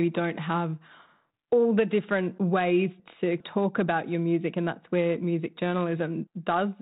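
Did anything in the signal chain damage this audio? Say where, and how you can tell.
No, the chain introduces no faults here.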